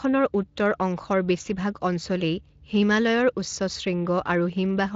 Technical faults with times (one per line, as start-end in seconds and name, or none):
none